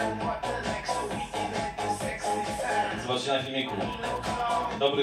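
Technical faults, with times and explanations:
2.98–4.89 s, GSM signalling bursts: a nearby 2G phone exchanging short control transmissions with the network sends brief groups of radio bursts, and the audio circuitry rectifies that radio energy into the signal path. What reaches the ear is a galloping dit-dit-dit run of short buzzes pitched at about 217 Hz, the burst repetition rate, sitting roughly 20 dB below the main sound and stopping once the signalling ends.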